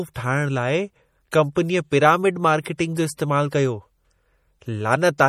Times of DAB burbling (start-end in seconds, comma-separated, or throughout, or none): none